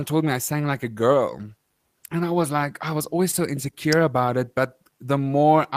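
At 3.31 to 3.35 s there is a short concealed packet loss: roughly 20 ms of speech arrived too late for the decoder, and about 15 ms of synthesized continuation patched the gap before blending back, leaving a brief smeared wobble in the voice.

At 3.93 s a sharp snap or tight cluster of clicks sits on top of the speech, an electrical switching spike whose source is likely an arc from a nearby switch, motor or static discharge coupling into the audio line.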